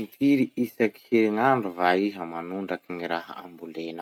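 Listening through this speech recording, nothing stood out as a technical fault at any point.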